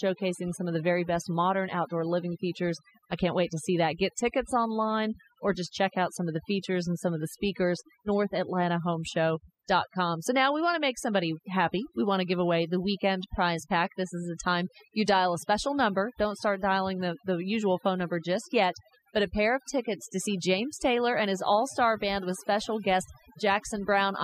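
Speech, with overdone noise removal running right through it: the background drops and breaks up into twinkling specks, and quieter parts of the voice get eaten too.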